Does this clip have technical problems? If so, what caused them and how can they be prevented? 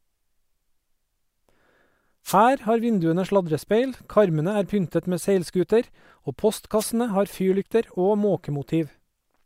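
Yes. Two wireless microphone noise hits occur, from 2.25 to 2.37 s and from 6.78 to 6.86 s, each a brief swish of static over the speech. The transmitter's FM signal dipped as reflected paths cancelled at the receiver, letting receiver hiss surge up. Unlike a digital dropout, the sound isn't muted or replaced by silence; noise rises and masks it. Diversity receivers, good antenna placement with line of sight, and a clean frequency prevent it.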